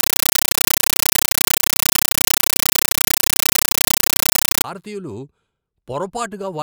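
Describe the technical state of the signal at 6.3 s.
At 6.3 s the speech signal is intact, with no audible fault at that moment.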